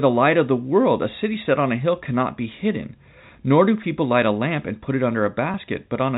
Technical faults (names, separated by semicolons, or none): packet loss with pitch repetition